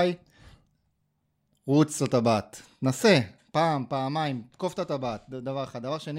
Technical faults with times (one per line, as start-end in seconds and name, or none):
none